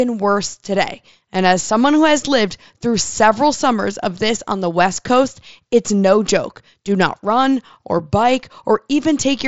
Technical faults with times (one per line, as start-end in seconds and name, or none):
none